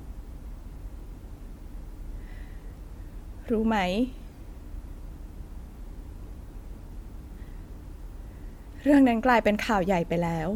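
Nothing stood out as a technical fault anywhere in the speech on listening.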